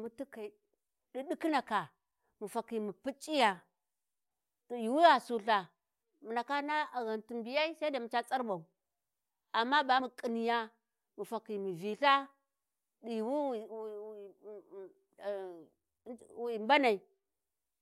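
The recorder likely works in 6-second chunks and dropped a sliver of audio while switching from one to the next, so at 10.00 s there is a case of audio missing between chunks: about 50 ms of speech vanishes and the two sides butt together, heard as a brief skip.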